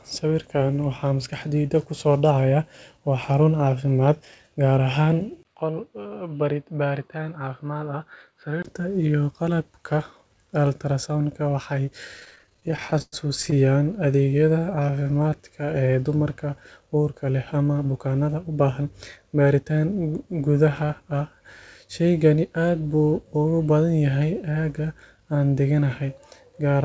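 At 5.43 s there's a 20 ms dropout, then the speech turns dull and boxy until 8.65 s. The band narrows, it's roughly 10 dB quieter, and there's a faint new noise floor. That's most likely the input switched to a poorer device, a narrower-band mic taking over for those three seconds. Before and after, the call path's G.722 coding reaches up to 8 kHz.

From 12.20 to 13.56 s the speech keeps catching and dragging: repeated stalls, a stutter of 27 small gaps where packets arrived late and the jitter buffer ran dry. The receiver stretched the last sound to cover 363 ms in all, with the longest hold at 104 ms. That's about a quarter of the stretch, but nothing is actually lost.

Then from 14.53 to 15.67 s, leading into "ee dumarka uurka leh", there's a jitter buffer slow-down. Pitch periods get repeated to rebuild the reserve, adding 163 ms, so the speech plays at 86% speed with the same pitch and sounds drawn out.

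Right after "ee dumarka uurka leh", from 17.54 to 18.87 s, it goes the other way with a jitter buffer speed-up. Around 150 ms of short pitch-period slices get trimmed to cut the backlog, so the speech runs at 111% with unchanged pitch and comes across a bit hurried.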